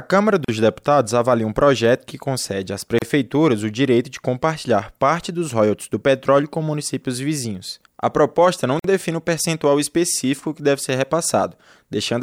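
Three short holes of silence cut into the speech: at 0.45 s for about 39 ms, at 2.99 s right after "projeto que concede às" for about 33 ms, and at 8.79 s between "proposta não" and "define o percentual específico" for about 50 ms. Each opens and closes abruptly, the edges softened by the codec, and the speech resumes exactly where it stopped. These are gaps at a join of encoded pieces: separately encoded segments were spliced untrimmed, leaving each encoder's start-up delay and final-frame padding in place.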